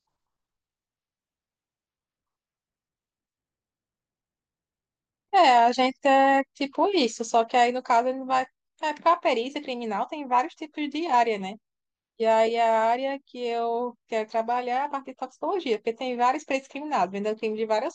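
Speech recording with no audible technical faults.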